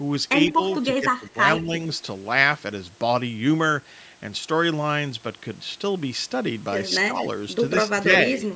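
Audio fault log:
0.53–0.6 s, 0.97–1.36 s, 1.62–1.73 s, 7.11–7.15 s and 7.89–8.08 s: speech suppressed in double talk. With both ends talking at once, the echo canceller likely could not tell the local talker from the loudspeaker echo, so it turned down everything its microphone sent. The voice briefly sinks by roughly 5 to 15 dB, with the deepest dips near 0.53 s and 7.89 s and the longest stretch around 1 s.
0.71–0.76 s: echo leak. A loudspeaker's sound likely reached the far end's microphone and was not fully cancelled, so a residue went back down the line. It is heard as a faint, short scrap of the voice repeated 144 ms late, roughly 20 dB below the direct speech.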